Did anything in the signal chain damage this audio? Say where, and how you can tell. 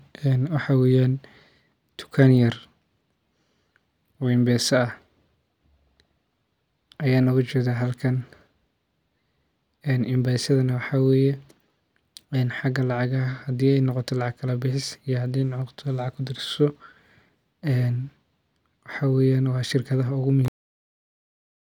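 Yes. The speech ends with a cut-off end at 20.48 s. The sound stops mid-syllable with no natural decay. Digital silence follows for the last 1.16 s until the file ends. The fault sits at the storage or buffer stage. The final buffers of audio were never written to the file. The recording was closed before that data reached it, so the speech is simply truncated rather than faded.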